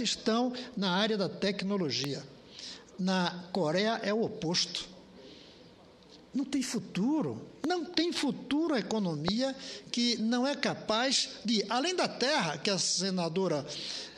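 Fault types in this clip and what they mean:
Loud pop: A sudden electrical pulse is added to the audio, likely from a plug, switch, static discharge or driver glitch. The circuits downstream shape it into a brief, sharp burst. Three single pops occur, at 2.04 to 2.06 s, 7.64 to 7.66 s and 9.28 to 9.30 s. Each lasts about 20 ms. They peak roughly 15, 10 and 20 dB above the surrounding sound. The sound continues underneath each one.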